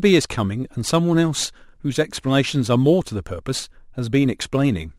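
From start to finish the speech carries crude rate conversion: the rate was changed without filtering, seemingly by picking the nearest sample, which fits a 48 kHz to 44.1 kHz step. The resulting error, roughly 25 dB below the speech, adds a gritty, inharmonic fizz that tracks loud, bright syllables.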